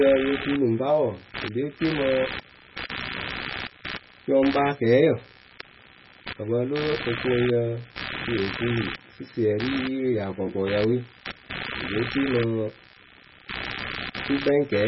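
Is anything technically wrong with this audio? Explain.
Yes, there are two faults, both present throughout.

Computer activity noise runs the whole clip, pulsing around 70 times per second, roughly 10 dB below the speech. Processor, graphics or mouse load shifts the audio circuit's shared ground, so the noise follows computer activity, not the speech.

Heavy codec damage also runs throughout, likely from MP3 compression at a very low bitrate, around 16 kbps. Starved of bits, the encoder drops weak frequency lines frame by frame, and nothing remains above 5.6 kHz. The speech sounds watery and swirly, with metallic s sounds and smeared attacks.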